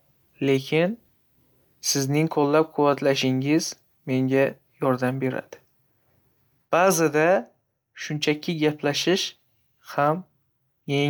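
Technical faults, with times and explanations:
No technical faults detected.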